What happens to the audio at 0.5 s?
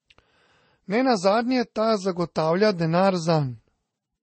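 At 0.5 s the speech carries the dull, swirly smear that runs through the whole clip, with nothing above about 8.3 kHz. That layered grit points to transcoding between lossy codecs, likely a low-bitrate MP3 re-encoded to Vorbis, each pass stacking its own artefacts.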